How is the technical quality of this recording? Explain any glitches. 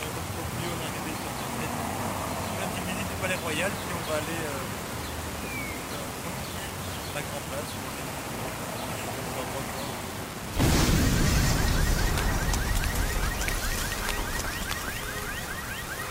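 The technical quality is poor, because one fault runs through the whole recording. Low bit depth without dither is present from start to finish. The audio sounds coarse and grainy, with distortion that rises and falls with the sound itself. It likely comes from reducing the signal to about 5 bits by rounding, with no dither added. Each sample snaps to one of only a few levels, so the error tracks the waveform. That error sits roughly 15 dB below the signal, which is loud enough to hear clearly. On a waveform the trace looks like a staircase. On a spectrogram, harmonic distortion smears across the spectrum wherever the sound is present.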